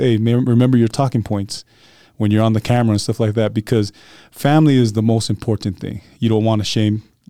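No technical faults can be heard anywhere in this speech recording.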